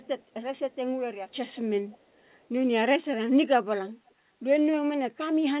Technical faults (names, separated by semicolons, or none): echo leak